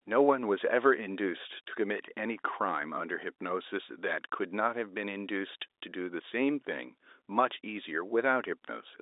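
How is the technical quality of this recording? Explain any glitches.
No glitches are audible.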